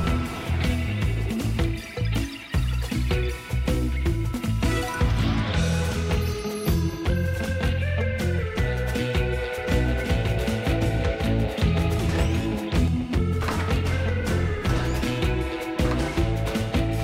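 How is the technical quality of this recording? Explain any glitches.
One fault stands out: a doubled audio track from 9.58 to 12.88 s. A second copy, a few dB quieter, trails by about a second, likely from a slower capture path. Unlike an echo, it has no decay or room colour and begins and ends abruptly.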